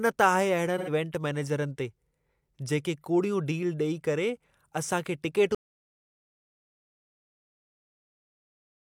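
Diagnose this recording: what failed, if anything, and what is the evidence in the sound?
Codec stage: AAC frame loss with concealment. From 0.78 to 0.90 s, just before "इवेंट मैनेजरनि ते", the speech turns briefly smeared and noisy rather than silent. About 85 ms were lost, which fits two missing frames that the decoder filled in by reusing the last good spectrum. Because the gap is filled with concealment, it is distinguishable from a true dropout.

Input or capture stage: audio dropout to silence. At 5.55 s the speech cuts off mid-flow and digital silence runs to the end of the clip, with no room tone and no fade. The likely cause is a lost input device or link while the recorder kept writing silence. Unlike concealment, nothing is rebuilt in the gap.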